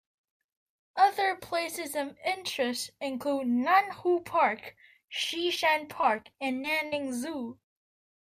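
From 6.01 to 6.94 s the speech breaks into repeated packet loss with a robotic sound. Audio data went missing six times in under a second, about 160 ms in all, with the longest hole 59 ms. Each gap was patched by stretching the preceding sound, so the voice turns choppy and robotic. On a spectrogram, short stretches of smeared, repeated harmonics interrupt the normal texture. The waveform shows abrupt joins and copied cycles at each patch.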